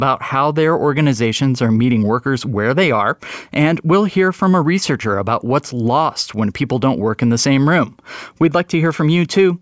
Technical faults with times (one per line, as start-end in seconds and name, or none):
none